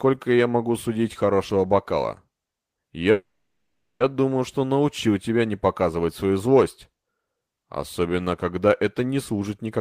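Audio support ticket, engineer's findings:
Call audio freeze, 3.11 to 4.02 s. Last sound smears into a fading buzz, then about 0.7 s of silence. Speech resumes at "думаю что научил тебя" with nothing lost, now running 0.89 s late. Likely jitter buffer underrun from delayed packets.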